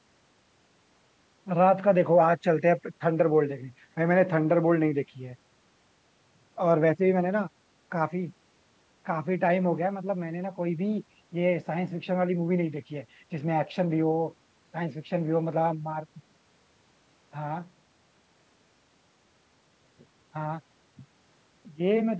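No technical faults are present in the speech; it carries only the ordinary shaping of call microphone processing, with the lowest bass trimmed away and nothing above 8 kHz.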